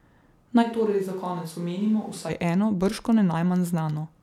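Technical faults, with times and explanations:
0.64–2.28 s, switch to a distant microphone: the speech abruptly turns roomy and hollow, loses bass, drops about 5 dB and carries room noise roughly 30 dB below it, likely because the close microphone dropped out, leaving a farther pickup, before close sound suddenly returns.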